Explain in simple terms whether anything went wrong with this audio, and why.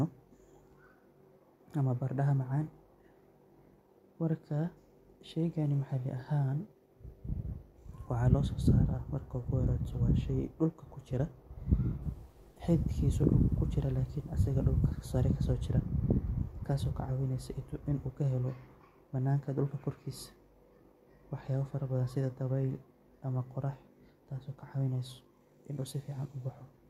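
From 12.03 to 15.05 seconds the speech turns grainy and rough. The grit follows the voice up and down. The quietest bits sputter or vanish. The likely cause is low bit depth without dither. The sound was chopped to coarse steps, consistent with 10 bits.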